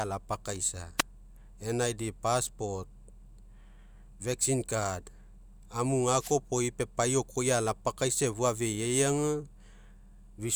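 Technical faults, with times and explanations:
0.98–1.02 s and 6.17–6.36 s, wireless microphone noise hit: brief static swishes over the speech as the FM radio link fades and receiver noise momentarily rises.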